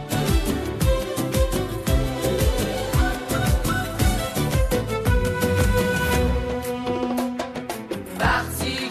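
Listening closely to the whole recording, nothing in the audio stood out as a technical problem.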